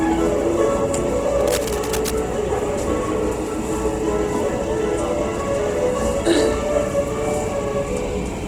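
Throughout this recording of everyday sounds, tones come across grainy and rough rather than clean, while the full bandwidth stays in place. The damage is plainly audible and points to Opus compression in its music mode at a low rate, consistent with something near 16 kbps. When the encoder runs short of bits, it keeps each band's energy but fills the detail with folded copies of lower bands or with noise, so the sound turns coarse rather than hollow. From 1.41 to 2.14 s, a dense, uneven scratching and rustling sits over the sound, roughly 10 dB below it. This cable scratch noise is most likely caused by a worn cable, connector or control being moved. As its contact resistance jumps about rapidly, it injects bursts of irregular noise into the signal for that short stretch before settling again.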